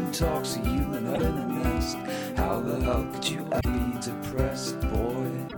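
Music with damaged data in the compressed stream at 1.11–1.21 s, 3.57–3.65 s and 5.45–5.54 s, where the decoder misreads corrupted frames and resynchronises. The result is a brief chirp, squawk, click or short hole.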